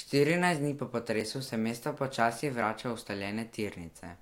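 Brief jumps at 1.21 s and 2.62 s, each skipping a few milliseconds of speech, likely come from a dropped buffer (overrun), where unread samples were overwritten and the edges joined.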